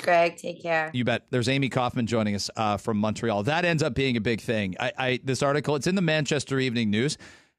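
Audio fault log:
No fault to log in this speech clip.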